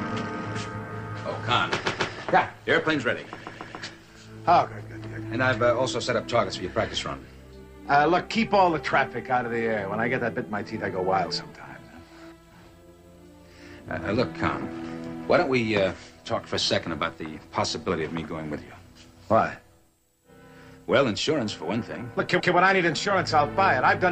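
Repeated frames at 1.84 s, 3.39 s and 22.39 s: the same 139 ms block plays again two, three and one extra times, stuttering each time.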